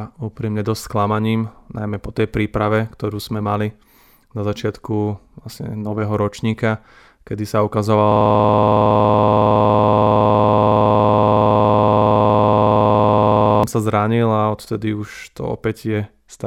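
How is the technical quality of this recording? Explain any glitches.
The recording has one serious glitch, a system hang loop from 8.12 to 13.64 s. A 46 ms slice of sound, which fits a 2048-sample buffer, repeats identically well over a hundred times at 21.5 Hz while the hardware replays a frozen buffer. The result is a rough, rattling buzz. Its exact repetition and abrupt release set it apart from mains hum or random stutter.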